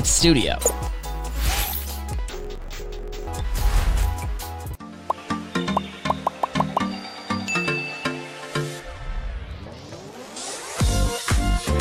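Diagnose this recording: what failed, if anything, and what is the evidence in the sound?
Sample-format conversion slipped up from 2.29 to 3.29 s: interleaved audio read as planar. Each 21.77 ms block got split into halves played together at half speed, so the sound drops an octave, doubles, and turns choppy.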